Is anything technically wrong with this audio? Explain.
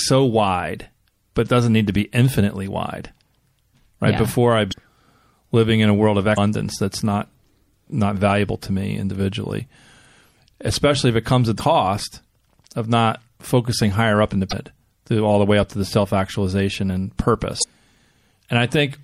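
Yes. Throughout, the speech sounds watery and swirly, with dull treble and smeared consonants. This is likely MP3 compression, as a low bitrate near 64 kbps cuts high frequencies and makes weak detail flicker. At 4.69, 6.34, 11.56, 14.49 and 17.6 s there are brief squawks about 45 ms long. These are damaged data in a compressed stream: corrupted frames make the decoder misread them and lose sync.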